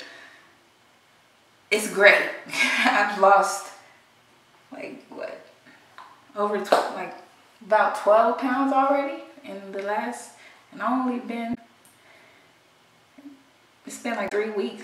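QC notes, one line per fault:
11.51–11.58 s and 14.25–14.32 s, damaged data in a compressed stream: two brief blips, each under a tenth of a second. Corrupted bytes in the compressed stream cause the decoder to misread those frames and lose sync, producing garbage output until it locks onto the next valid frame header.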